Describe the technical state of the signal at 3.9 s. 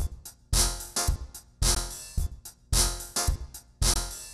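At 3.94 to 3.96 s the sound drops out for about 21 ms, a short hole with smeared edges, then resumes where it stopped. This is a gap at a join of encoded pieces: separately encoded segments were spliced untrimmed, leaving encoder delay and end padding as silence.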